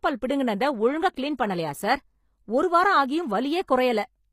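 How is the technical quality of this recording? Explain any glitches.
The recording carries plainly audible codec damage from start to finish. The sound points to HE-AAC compression at a low bitrate, likely the v2 variant. Only the lower spectrum is truly coded. The treble is rebuilt by copying lower bands upward and shaping them with a coarse envelope. That treble is not the original, so its harmonics do not line up with those below. S sounds in the speech turn gritty and lispy. Nothing is present above 15.5 kHz.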